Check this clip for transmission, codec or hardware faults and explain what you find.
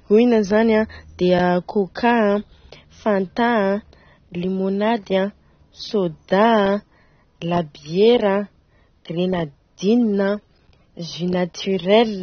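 One codec fault runs through the whole clip. From start to finish the speech sounds dull and smeared, with nothing above 6.3 kHz and a warbling, fizzy edge on sibilants. This is likely AAC compression: the encoder discards high frequencies and coarsely quantises the remaining bands, which points to a low bitrate around 24 kbps.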